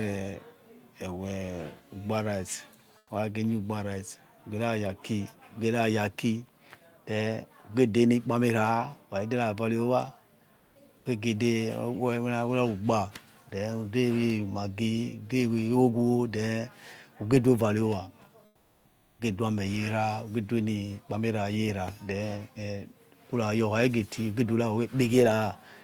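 Between 2.97 and 3.09 s, comfort noise replaces the background for 120 ms. The real room tone, sitting about 34 dB below the loudest speech, gives way to a flat, featureless hiss about 7 dB quieter. The likely cause is discontinuous transmission, in a way that fits Opus DTX. The sender stops sending during the pause, and the receiver fills the gap with synthetic noise shaped roughly like the background. The same swap returns from 10.55 to 10.75 s, for 200 ms, with the fill about 4 dB quieter.

From 13.49 to 13.51 s, 20 ms of sound is dropped by the voice detector. The detector likely mistook this stretch for background and stopped sending. The speech drops out and returns a moment later. It sounds like a tiny hole in the sound.

From 18.45 to 19.19 s, comfort noise again stands in for the background, this time for 740 ms. The background sits about 37 dB below the loudest speech. The fill drops about 12 dB, so the pause sounds emptier and smoother than the room around it.

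At the end of that gap, from 19.08 to 19.19 s, the onset is clipped by the voice detector. The detector was likely slow to notice that speech had resumed, so 110 ms went unsent and comfort noise played instead. The next word starts abruptly, missing its soft beginning.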